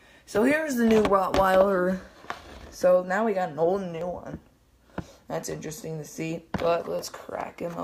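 At 4.01 s and again at 6.99 s there is a tiny skip from an overlap between stream segments. Adjacent segments, which fit about 1 s chunks, claim the same time span, so 7 ms and 15 ms of audio are trimmed and the waveform jumps discontinuously.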